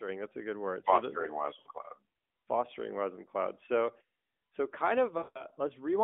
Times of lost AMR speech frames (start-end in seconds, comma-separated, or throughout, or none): 1.60-1.68, 5.18-5.45